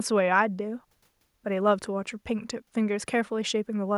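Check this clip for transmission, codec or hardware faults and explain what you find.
Nothing to report: no transmission, codec or hardware faults can be heard anywhere in the speech.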